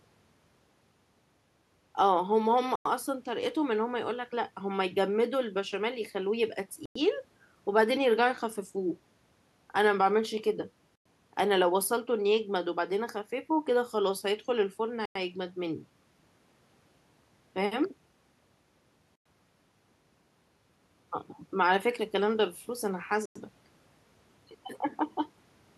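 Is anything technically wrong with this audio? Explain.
Yes: the speech drops out in hard-edged silent holes of 100 ms at 2.76, 6.86, 10.96, 15.06, 19.16 and 23.26 s. This is a gap between chunks: audio delivered in 4-second chunks has silence inserted at each join.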